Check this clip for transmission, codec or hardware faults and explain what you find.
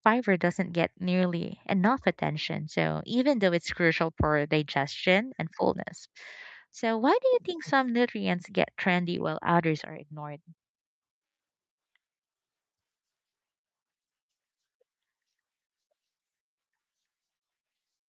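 Nothing here sounds wrong: the speech simply has the ordinary sound of a call, with the top end stopping around 8 kHz as the call codec leaves it and the deepest bass trimmed by the usual microphone processing.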